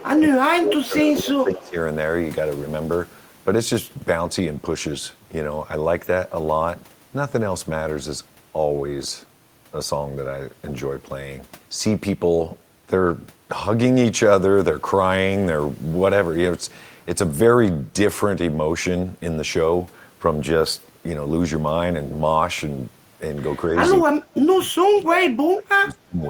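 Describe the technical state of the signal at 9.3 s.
At 9.3 s the speech signal is intact, with no audible dropout, distortion, clipping or other fault at that point.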